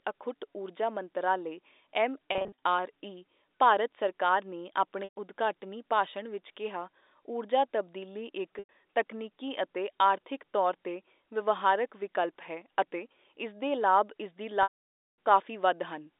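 Packet loss with pitch repetition hits at 2.32 to 2.58 s, where about 180 ms of short gaps, none longer than 30 ms, scatter across 300 ms, giving a buzzy flutter. Single gaps follow at 5.04 s after "ਭਾਰਤ ਸਰਕਾਰ ਨੇ" (120 ms) and at 8.59 s after "ਕਿਹਾ ਊਰਜਾ ਤਬਦੀਲੀ ਇੱਕ" (100 ms). In each, the receiver loops the last pitch cycle into a held note. At 14.63 to 15.17 s a 550 ms loss fades that note to silence, and speech cross-fades back in.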